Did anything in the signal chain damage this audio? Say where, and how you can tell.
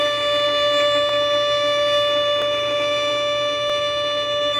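Yes. Three sharp single clicks, at 1.09, 2.42 and 3.70 s, each show as a thin vertical line across the spectrum with nothing audibly missing. These are dropped samples, likely lost at the driver or buffer stage. A fraction of a millisecond vanished, so the waveform jumped.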